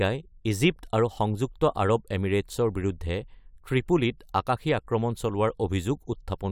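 No technical fault can be heard anywhere in the recording; the signal stays intact and continuous throughout.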